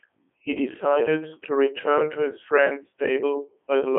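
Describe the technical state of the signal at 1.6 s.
Codec 2 vocoder damage is present at 1.6 s, as across the whole clip. Only pitch, voicing, energy and a spectral envelope survive, and sine-wave resynthesis rebuilds the speech, heavily robotic and buzzy, within a 250 Hz to 3.4 kHz band, nothing above 3.6 kHz. This fits the 3.2 kbit/s mode.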